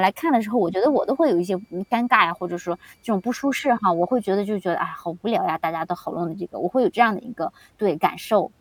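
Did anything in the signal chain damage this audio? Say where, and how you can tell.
Yes. The damage is in the analogue stage: a switching supply whistle. From 0.75 s to 4.42 s a thin, high tone sits under the speech. Its pitch wanders slightly, between about 2.31 and 2.35 kHz. It is faint, roughly 45 dB below the speech. A switching power supply near the audio path is running in an audible burst mode or beating with another supply. Its switching rate leaks into the wiring as that drifting whistle.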